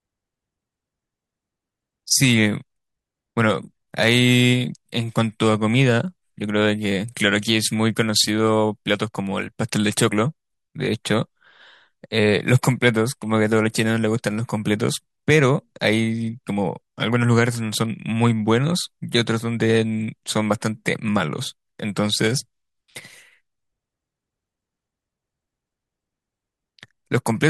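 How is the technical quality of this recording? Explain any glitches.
Nothing in the recording sounds off; there are no glitches or technical hiccups to point to anywhere in it.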